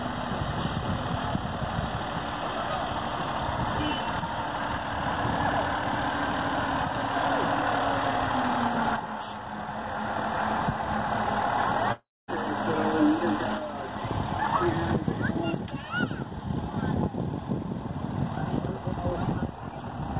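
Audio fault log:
11.92–12.30 s, long network dropout: the sound breaks off and the receiver stretches out what it last heard, so a fading buzz fills about 0.36 s, its final 0.23 s near silence, before audio returns with roughly 0.36 s of the original simply missing. The likely cause is packets lost in transit, with concealment covering the gap. The band stopping at 4 kHz fits a G.711-style call codec.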